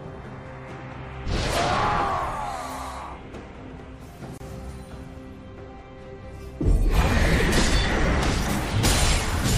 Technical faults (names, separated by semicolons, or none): gap at a join of encoded pieces